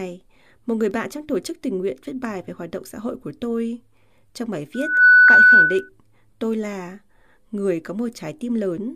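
From 4.74 to 5.89 s, loudspeaker feedback squeal: a 1.5 kHz tone swells over roughly a third of a second to about 15 dB above the speech, ending before "tôi là người".

At 5.28 s, compressed frames are skipped: around a tenth of a second of audio is lost, consistent with a few 26.1 ms frames.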